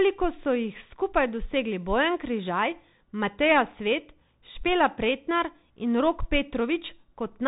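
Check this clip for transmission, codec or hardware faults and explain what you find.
One fault runs through the whole speech clip: Bluetooth CVSD headset codec damage. Nothing passes above 3.8 kHz. One-bit up-or-down steps can't track loud highs, so s sounds scratch over granular hiss.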